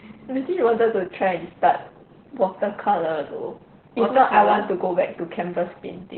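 Opus voice compression runs throughout the speech. The SILK linear-prediction coder keeps only a narrowband signal up to 4 kHz and codes the excitation very coarsely, which fits a rate near 8 kbps, leaving the speech muffled, hoarse and faintly robotic.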